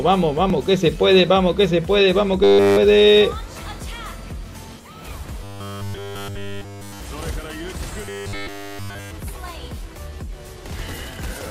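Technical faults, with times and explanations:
2.44–2.77 s, 5.43–7.00 s and 8.03–9.11 s: robotic sound from repeated short buffers. The sound becomes a rigid metallic buzz at 100 Hz. The likely cause is a 10 ms chunk being looped in place of nearly all new audio. On a spectrogram this shows as evenly spaced horizontal harmonics 100 Hz apart. The waveform shows identical cycles repeating every 10 ms.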